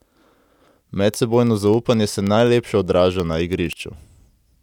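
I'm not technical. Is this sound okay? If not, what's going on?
No, there are word clock ticks from 0.14 to 4.59 s, roughly every 70 ms, because two digital devices aren't sharing one clock and keep slipping a sample.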